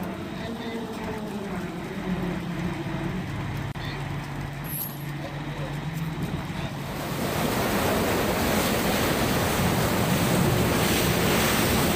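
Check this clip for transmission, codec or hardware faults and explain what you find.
One fault is present. At 3.72 to 3.75 s there is a gap at a join of encoded pieces: separately encoded segments were spliced untrimmed, so encoder delay and end padding open a 32 ms break before the sound resumes where it stopped.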